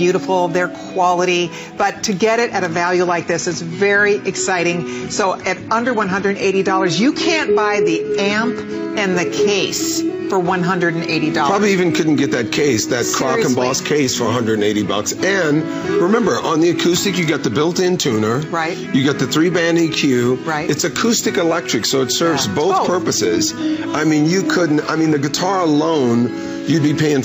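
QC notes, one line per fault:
2.73–8.73 s, adaptive stream at a lower bitrate: treble abruptly stops near 9.6 kHz and codec artefacts thicken, which fits a switch to a lower bitrate. The switch leaves no gap, unlike a dropout.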